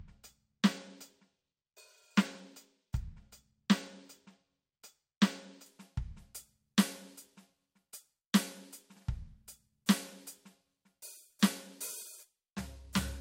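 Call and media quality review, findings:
Channel delay (comb filtering), 0.00–5.66 s. Music sounds dulled at the top, with a fixed high-frequency notch near 10 kHz. Probable component: stereo-to-mono downmix. One channel lags by a tiny fraction of a millisecond, which fits a couple of samples' offset. Summing then cancels shared content at evenly spaced frequencies, with the first null around 10 kHz.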